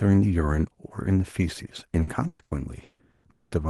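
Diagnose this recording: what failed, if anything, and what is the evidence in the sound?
From 2.03 s to 3.54 s the speech turns choppy and robotic, with pieces dropping out. The cause is repeated packet loss on the network. Six gaps, the longest 200 ms and 720 ms in total, were each filled by stretching the preceding sound, so about half that stretch is concealment.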